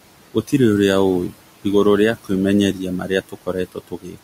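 Noise suppressor artifacts run through the whole clip. The room noise, which sits about 17 dB below the speech, is pushed down by about 18 dB in the pauses and allowed back up under the speech. The background therefore pumps instead of holding steady, which sets it apart from a plain noise floor.

Speech cut by the noise suppressor comes at 3.29 to 3.56 s and again at 3.72 to 4.18 s. Here the suppressor mistakes parts of the speech for noise and drops them by about 18 dB and then about 19 dB. Roughly a sixth of a second and a third of a second come out faint or swallowed. Unlike a dropout, the sound sinks along with the background rather than stopping dead.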